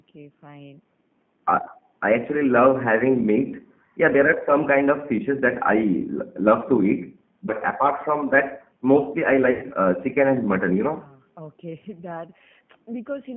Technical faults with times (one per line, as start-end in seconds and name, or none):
0.00-13.37 G.729 codec
7.46-7.52 VoIP packet loss concealed by the speech codec
9.51-9.66 VoIP packet loss concealed by the speech codec